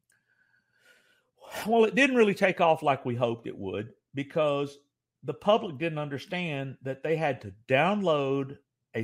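No dropouts, glitches, distortion or level jumps turn up anywhere in the recording.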